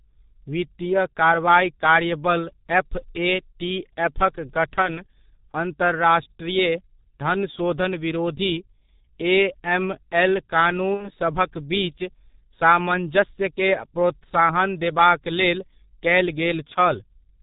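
Throughout, the speech carries heavy G.723.1 codec damage: muffled, hoarse, with smeared consonants. A spectrogram shows nothing above 4 kHz, consistent with a roughly 6 kbit/s, 30 ms-frame coder.

At 4.82 to 4.90 s and 10.94 to 11.10 s, VoIP packet loss concealed by the speech codec turns the speech into a fading buzzy tone or coloured noise, with flattened harmonics and shrinking waveform amplitude, pointing to one and then two lost 30 ms frames.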